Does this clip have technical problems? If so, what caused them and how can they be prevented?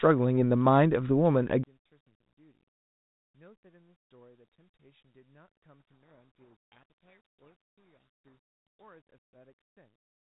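Yes. From 1.6 s to the end, the speech drops by about 37 dB to a thin residue. That is likely one channel inverted, cancelling when summed to mono. Unlike a dropout, faint differences remain. Check polarity on both channels before any mono fold-down.

From 6.10 to 8.85 s, a codec payload misread, with G.726 code words read in the wrong bit order, buries the speech in harsh distortion, far beyond the light hiss of normal 32 kbit/s G.726. Make sender and receiver agree on the G.726 bit packing.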